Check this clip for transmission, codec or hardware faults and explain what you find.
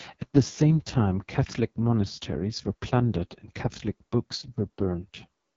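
One codec fault runs through the whole clip. The AMR wideband (HD Voice) codec is heavily degraded. A model-based coder rebuilds the speech with too few bits, which fits its lowest 6.6 kbit/s mode. The speech sounds rough and raspy, with nothing above 7.5 kHz.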